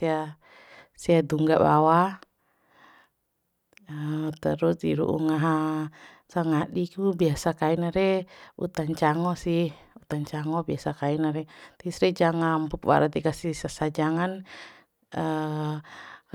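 No audible technical faults.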